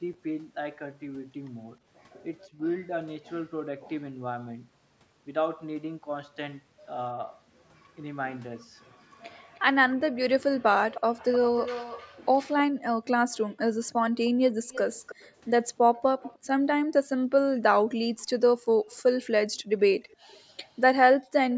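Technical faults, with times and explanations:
0.03–0.1 s and 2.47–2.62 s: speech suppressed in double talk. The echo canceller likely mistook the talker for loudspeaker echo while both sides spoke and pulled the microphone down. The speech dips by around 10 dB for brief moments of under a fifth of a second.
9.54–16.38 s: echo leak. The far end's canceller likely failed to remove all the loudspeaker sound its microphone caught and sent the remainder back. A faint copy of the speech trails it by 310 ms, about 15 dB below the direct voice.
18.19 s to the end: echo leak. The same incomplete cancellation likely lets loudspeaker sound return, but much more weakly. The copy arrives 310 ms late and sits far down, about 35 dB under the speech.
12.69–12.83 s, 16.83–17.22 s and 18.77–21.33 s: background gated by the echo canceller. While the loudspeaker was active, the canceller clamped the microphone hard. 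The room sound drops by about 40 dB for short spells and then returns once the canceller releases.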